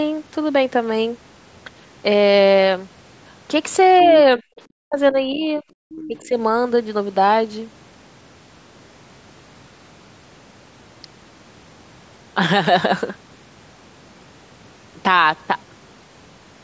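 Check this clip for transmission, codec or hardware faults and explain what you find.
Two faults from an echo-cancelled call affect the speech between 3.99 and 6.38 s. The nothing-above-8 kHz band limit of the call's microphone processing is present too.

Other side's voice leaking through: From 3.99 to 4.22 s a faint second voice sits about 30 dB below the talker, returning louder, about 20 dB down, from 5.96 to 6.27 s. The likely cause is loudspeaker playback that the echo canceller left in the microphone signal.

Speech suppressed in double talk: From 4.37 to 5.63 s the talker's voice dips and breaks up in pieces, totalling roughly 0.7 s and dropping by around 40 dB at worst. A milder dip of about 10 dB follows from 6.08 to 6.38 s. This is likely the canceller turning everything down when both sides spoke at once.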